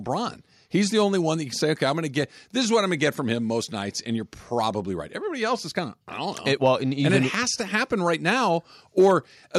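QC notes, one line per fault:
No fault to note, so there is no line per fault here.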